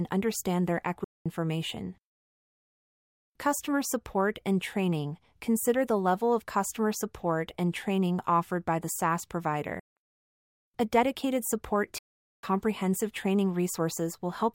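The speech cuts abruptly to silence three times: at 1.04 to 1.26 s after "understand their", at 9.80 to 9.97 s, and at 11.98 to 12.43 s between "dedicated support" and "comprehensive training". It resumes further on each time, a likely Bluetooth dropout where late packets were discarded.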